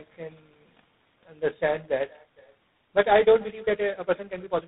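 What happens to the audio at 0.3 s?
Echo with no canceller is present at 0.3 s and throughout. The far end's loudspeaker feeds its microphone, and nothing removes the returning sound, so every phrase is shadowed about half a second later by a thin copy about 28 dB down.

Tandem speech coding runs across the same moment. The signal seems to have passed through two speech coders in series, which fits a GSM full rate link followed by G.726. Each coder re-encodes the previous one's damage, leaving rough, warbly, muffled audio.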